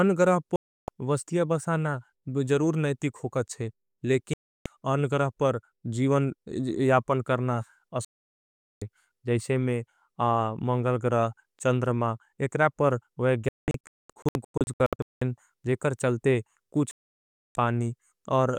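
Digital broadcast dropouts mute the speech at 0.56 s (about 0.32 s), 4.34 s (0.32 s), 8.05 s (0.77 s), 16.91 s (0.64 s), and as scattered short holes across 13.49–15.22 s. Lost signal or failed frames cause each mute, and that audio is lost.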